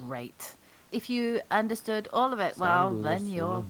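Nothing stood out on listening to this speech recording; the faint room noise, about 35 dB below the speech, belongs to the space where it was recorded.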